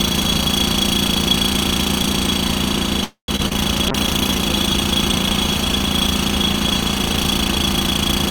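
At 3.04 s the audio stalls for about a quarter of a second, through 3.30 s. The last sound carries on as a fading buzz and then drops to silence for around 120 ms before resuming where it left off, with nothing lost. This is a call audio freeze, likely from packets held up in transit until the jitter buffer ran dry, adding about 242 ms of delay.

Shortly after, two brief smears land at 3.36 to 3.41 s and 3.49 to 3.52 s, each a quick wobble where about 20 ms of audio disappears. These are short concealed packet losses. Late packets missed the decoder, and the receiver extrapolated from the preceding sound before blending back.

From 3.90 s to the end the sound turns coarse and watery, with the top end dulled. This is a call bitrate drop. The encoder was pushed from 128 kbps down to 28 kbps after the bandwidth estimate fell, and it stays at its lowest for about 3 seconds.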